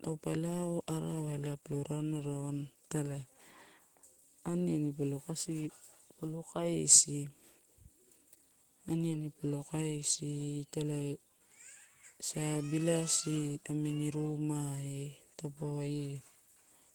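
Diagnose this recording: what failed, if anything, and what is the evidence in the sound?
Nothing failed; no fault is audible in this recording.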